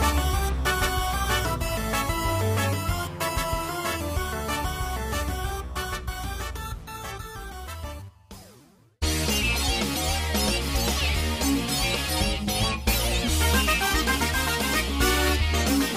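Nothing technical goes wrong anywhere in the audio, so there's nothing to flag here.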